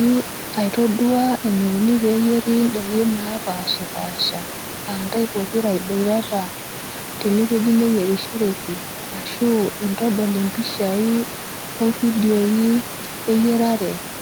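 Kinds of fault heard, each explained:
The speech signal shows no technical faults, with only the room's own background noise sitting about 13 dB below the speech as part of the recording.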